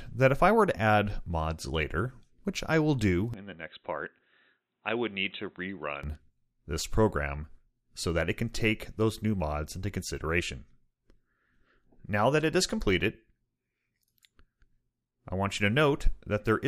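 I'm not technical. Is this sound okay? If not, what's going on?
No. From 3.34 to 6.03 s the sound turns dull and a little quieter, with nothing above about 3.9 kHz and a different faint background noise, then clears again. That points to the input likely switched to a poorer device, not a simple volume dip.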